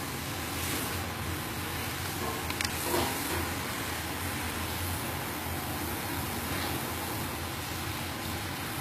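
Throughout the sound, a metallic, grainy treble points to HE-AAC compression, likely at a low bitrate around 20 kbps. The upper band is rebuilt from copied lower bands, so harmonics misalign. A spectrogram shows smeared, repeated-looking high bands and nothing above 14.9 kHz.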